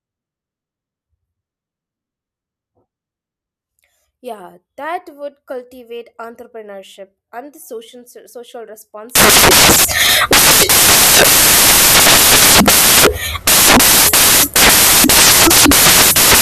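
From 9.15 s to the end at 16.42 s the speech gives way to loud white noise: samples built from the wrong bytes, with the low, fast-changing bits read as the high part of each value.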